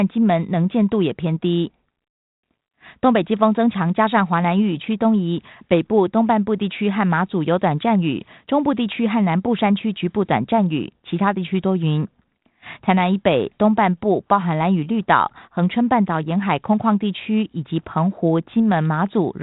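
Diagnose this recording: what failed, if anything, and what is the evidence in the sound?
No failure found in this recording.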